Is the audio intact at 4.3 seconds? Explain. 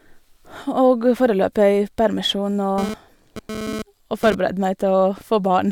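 No. At 4.3 seconds the speech is still under GSM phone buzz, which runs from 2.78 to 4.35 s. A nearby 2G phone transmitting in bursts about 217 times a second induces radio pulses that the audio circuitry rectifies into a hard, raspy buzz at 217 Hz with a dense stack of harmonics, unrelated to the speech. Here the phone is moving data, so the buzz comes and goes, sitting about 8 dB below the speech.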